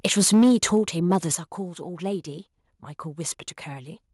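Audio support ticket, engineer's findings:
Microphone overload, 0.05–0.79 s and 1.11–1.16 s: harsh crackle on loudest syllables, peaks flattened against converter ceiling, about 7 dB over in the first stretch and about 2 dB in the second, clipping a few percent of samples. Likely cause: mic input gain set too high.

Microphone volume stepped down, 0.34 s and 1.35 s: sudden level drops in speech and background, about 3 dB then about 8 dB. Likely cause: call software's automatic gain control cutting device input volume in single steps.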